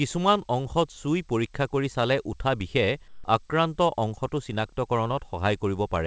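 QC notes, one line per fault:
3.08–3.24 s, comfort noise in place of the background: right after "কৰি চালে উঠা বিষে" and before "আক্ৰান্ত অংশটো", the room tone, sitting roughly 28 dB below the loud passages, gives way for 160 ms to a smooth, featureless hiss about 3 dB quieter. Unlike a dropout or noise gate, the gap never falls to silence; it is filled with steady synthetic noise, likely from discontinuous transmission pausing the sender and the receiver generating a rough match.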